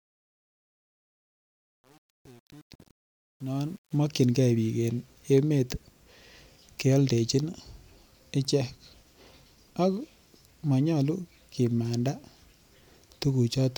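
The clip opens with truncation distortion on a fade. The speech fades in from the very start up to about 3.96 s. But the quiet part is rough from 0.0 to 3.71 s. The level stage keeps too few bits and adds no dither. The low-level waveform collapses into coarse square steps, which fits an 8-bit stage. It sounds gritty.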